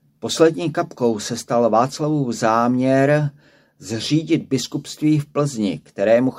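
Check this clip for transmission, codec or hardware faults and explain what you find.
Nothing stood out on listening to this speech clip.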